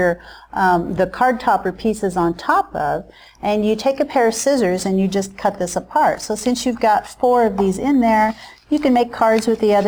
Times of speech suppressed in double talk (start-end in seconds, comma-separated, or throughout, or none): none